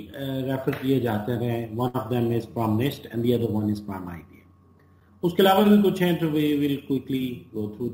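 At 1.87 s a burst of packet loss interrupts the audio until about 1.97 s. Several consecutive packets failed to arrive in time to play, so the receiver filled the gap by repeating and extending the last sound it had, for about 64 ms, fading it as the gap went on. When playback resumes, about 60 ms of the original audio has been skipped, leaving a brief smeared hold followed by an abrupt jump forward.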